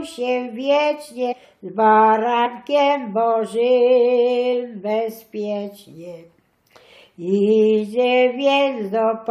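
The audio has two instances of compressed frames skipped, at 1.31 to 1.33 s and 2.45 to 2.47 s. At each point whole frames of the encoded stream were never decoded, either missing or rejected as corrupt, so playback jumps forward. The first jump loses about five frames, roughly a tenth of a second. The second loses about two frames, near 50 ms. Each frame spans 23.2 ms, which fits 1024-sample frames at 44.1 kHz.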